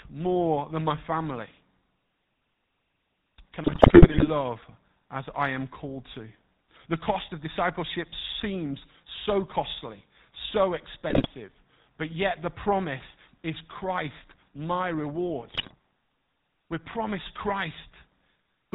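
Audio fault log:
throughout GSM full-rate codec: The speech has a buzzy, gravelly roughness and nothing above 4 kHz. The codec rebuilds the voice from a vocal-tract model excited by a thinned pulse train, which fits the 13 kbit/s GSM full-rate coder, and the damage is plainly audible.
3.64–4.28 s, 11.10–11.27 s, 15.54–15.74 s GSM bit errors: The speech breaks into squawks, pops and gargling, longest in the first burst. Corrupted bits reached the decoder, scrambling filter, pitch and gain values, which warps the spectrum and makes the level jump frame by frame.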